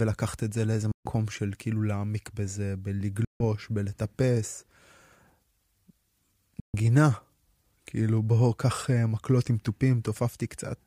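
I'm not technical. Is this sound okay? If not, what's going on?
No. The speech cuts out three times, briefly going silent from 0.92 to 1.13 s, 3.25 to 3.43 s and 6.60 to 6.76 s, then picks up again slightly further along, so a short piece is skipped each time. This is most likely a Bluetooth dropout: bits of the audio reached the wireless headphones too late and were thrown away, leaving a gap until fresh audio arrived.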